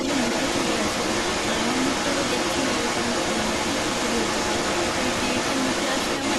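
Right through the speech there's an echo leak, a copy arriving 296 ms late and strong, about 5 dB hot, likely a loudspeaker's echo canceller letting it slip back.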